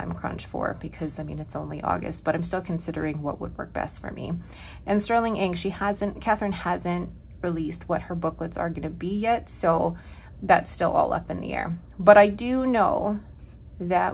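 No technical faults can be heard anywhere in the clip. It has clearly passed through a call path, and its content stops at about 4 kHz, which fits a narrowband telephone codec such as G.711 mu-law.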